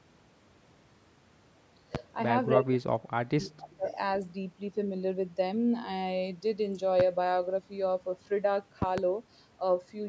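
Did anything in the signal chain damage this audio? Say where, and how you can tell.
Yes. Loud pops sit on the speech at 1.95 to 1.98 s, 7.00 to 7.03 s, and 8.82 to 9.01 s, where two arrive in quick succession. Each peaks about 15 dB above the speech. The stage is likely analogue wiring or a driver glitch injecting a voltage step.

Speech suppressed in double talk runs from 2.56 to 3.87 s. The voice dips for roughly a second in total, falling by as much as about 35 dB. This is likely call processing. The echo canceller confused both talkers and turned the near side down.

An echo leak follows at 3.88 to 3.95 s. It is a faint copy of the speech delayed by 293 ms, sitting about 30 dB below it. The likely cause is call processing. A loudspeaker's echo canceller missed some pickup and sent it back.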